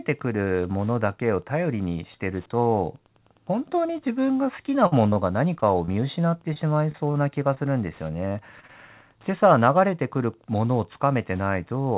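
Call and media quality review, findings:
Repeated packet loss (robotic sound), 4.84–7.58 s: choppy speech with pieces missing, about a dozen short holes, longest 51 ms, each patched by stretching the last bit of sound. Jitter buffer concealing late or lost packets back to back. Again at 8.28–8.71 s, four holes up to 24 ms, denser, about a fifth of that stretch concealed. Band stops at 4 kHz, consistent with 64 kbps G.711 narrowband on the call path.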